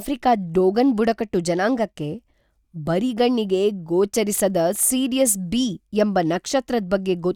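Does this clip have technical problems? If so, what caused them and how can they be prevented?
Yes. At 3.20 s the speech has a single sharp click, most likely from dropped samples: a tiny run of samples, around a tenth of a millisecond, was lost, so the waveform jumps abruptly from one value to a later one. On a waveform this shows as a sudden step discontinuity; on a spectrogram, a thin vertical line across all frequencies. To prevent it, give the capture and processing chain enough buffer headroom and a stable clock.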